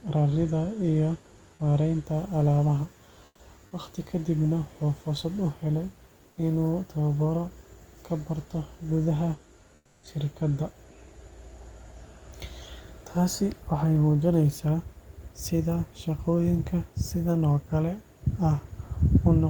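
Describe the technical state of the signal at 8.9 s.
At 8.9 s the signal is intact, with only the room's own background noise sitting about 36 dB below the speech.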